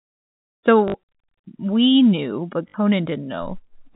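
Packet loss with last packet repeated hits at 0.88 to 0.94 s and 2.68 to 2.74 s, just after "we knew but". Each 60 ms gap, consistent with three 20 ms packets, is filled by replaying the last one, giving a 50 Hz robotic stutter.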